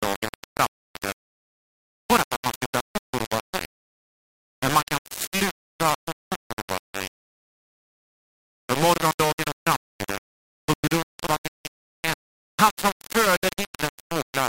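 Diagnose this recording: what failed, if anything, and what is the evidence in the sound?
The speech is heavily grainy from start to finish: a harsh, buzzy distortion rides on every syllable and shifts with the voice, and the quiet tails of sounds break into sputter or drop to silence. That is low bit depth without dither, likely from a sample-format conversion that rounded the audio to about 3 bits. With so few steps, the rounding error tracks the waveform and sits only about 5 dB below the speech.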